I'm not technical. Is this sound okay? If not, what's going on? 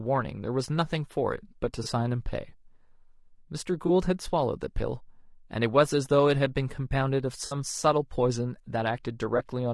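No. The speech was squeezed through a low-bitrate codec, likely low-delay AAC compression of the kind video calls use. At such a low bitrate it cannot capture a voice's fine detail, so the whole clip sounds rough and grainy, with a hiss-like fuzz and a thin, artificial top end.

There is also AAC frame loss with concealment. Small pieces of the audio stream went missing, and the player patched each gap by guessing from what came just before. You hear brief smeared, noisy blips at about 1.83, 3.87 and 9.37 seconds, each about 20 ms, and a longer 60 ms one at 7.45 seconds.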